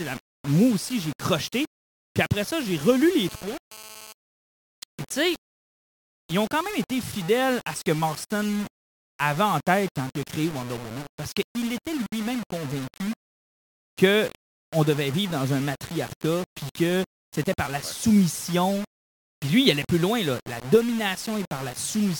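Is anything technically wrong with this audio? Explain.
Yes, three faults can be heard in this speech.

Throughout, the speech carries a grainy distortion that moves with the voice, quiet passages turn gritty and the faintest parts sputter or drop out. This is low bit depth without dither, likely about 5 bits with plain rounding, so the error sits roughly 15 dB below the speech. The waveform shows coarse stair steps, and the spectrogram shows broadband noise that follows the speech energy.

From 3.01 to 4.13 s, just after "après ça j'ai", a harsh raspy buzz at 217 Hz appears, about 19 dB below the speech. This is GSM phone buzz. A nearby phone's radio bursts, here from a data transfer, are rectified by the audio circuit. On a spectrogram it forms a comb of harmonics spaced 217 Hz apart that switches on and off.

At 12.06 s, right after "parce qu'il était", the speech drops out for 60 ms and then resumes where it stopped. 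This is a gap at a join of encoded pieces. The encoder's start-up delay and final-frame padding were left in where two separately encoded sections meet. The waveform shows a flat, near-silent notch with smeared edges, and the spectrogram shows a thin vertical blank band.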